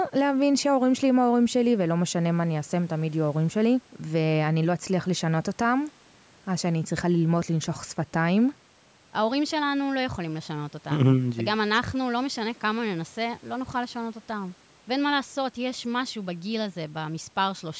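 Nothing stood out on listening to this speech recording, which has passed through a call's microphone processing with its usual trimming of the lowest bass.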